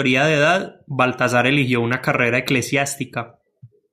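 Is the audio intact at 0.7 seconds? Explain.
Yes, the audio is intact at 0.7 seconds, with no audible fault at that moment.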